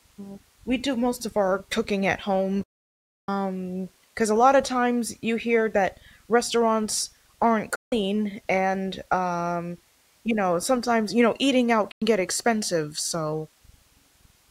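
The receiver stopped getting usable digital frames three times and muted until clean frames returned, a digital broadcast dropout. The speech fades out within about 8 ms and falls silent from 2.63 to 3.29 s (640 ms), from 7.75 to 7.93 s (160 ms), and from 11.91 to 12.02 s (96 ms). Each gap fits a whole number of roughly 32 ms frames. When the sound returns, the speech has jumped ahead, and whatever was sent during each silence is gone.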